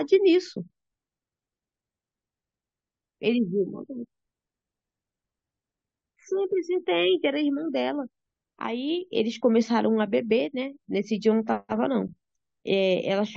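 No technical faults can be heard anywhere in this recording.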